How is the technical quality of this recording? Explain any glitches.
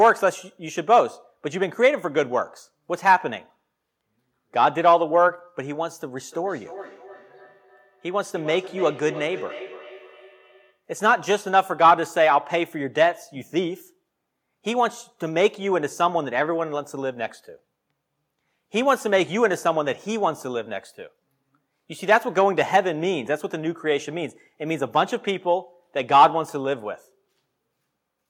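The speech has one clear problem, a feedback echo between two devices from 6.25 to 10.82 s. A second device in the room replays the call into a microphone whose echo canceller ignores it, so speech returns roughly every 300 ms, peaking about 16 dB below the speech. On a spectrogram, faint copies of each burst repeat at that spacing.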